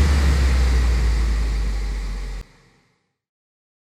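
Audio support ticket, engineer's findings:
CD skip at 2.41 s. Brief tick and a mute of about 10 ms, then playback resumes from a different point on the spiral. Probable cause: laser pickup jumping tracks after a knock or disc flaw. Unlike a plain dropout, the sound does not continue where it stopped.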